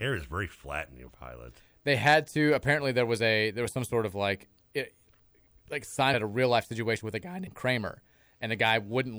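At 6.13 s and 7.46 s the speech jumps ahead as compressed frames are skipped. The decoder lost roughly 200 ms, then roughly 50 ms, which fits dropped blocks of about seven and two 26.1 ms frames.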